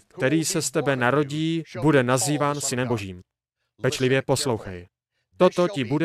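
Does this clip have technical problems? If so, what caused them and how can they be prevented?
Yes. From 2.27 s to the end there is a time-stretched section. The speech runs 1.47 times faster with unchanged pitch, so the pace suddenly turns rushed. This is likely caused by software dropping short pieces to shorten it. A spectrogram shows harmonics at normal spacing but syllables crowded together, and the waveform shows compressed envelopes with small splice discontinuities. To prevent it, fit the timing by editing or re-recording rather than automatic stretching.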